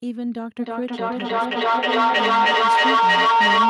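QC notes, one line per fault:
0.59 s to the end, feedback howl: a microphone-to-loudspeaker loop gains level on every pass, so the repeats swell rather than fade and narrow to a tone around 1 kHz, pulsing roughly every 300 ms and peaking about 11 dB above the speech. On a spectrogram this shows as a bright horizontal band near 1 kHz; the waveform's envelope climbs in pulses.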